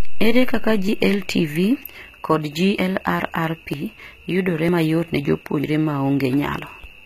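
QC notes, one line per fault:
Throughout: HE-AAC compression, likely at about 20 kbps. The treble is copied up from lower bands, so s sounds turn gritty and metallic rather than dull, and nothing sounds above 14.9 kHz.
0.89, 1.84, 2.79, 3.74, 4.69, 5.64, 6.59 s: audio missing between chunks. About 50 ms is skipped every 0.95 s and spliced without silence, so these are jumps rather than dropouts, likely from 1-second chunks.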